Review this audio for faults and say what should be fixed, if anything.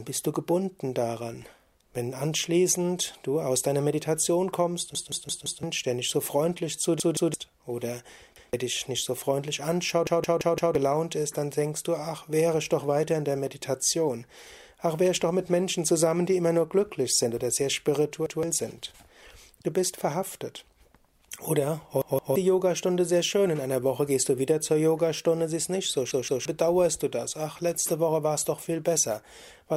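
Repeated buffer at 4.95, 7.00, 8.36, 10.07, 18.26, 22.02 and 26.11 s. Fresh audio missed its deadline, so the device replayed its last 171 ms block, which fits an 8192-sample buffer. Each spot stutters one to four extra times with hard joins. A larger output buffer or a higher-priority audio thread would keep new audio arriving in time.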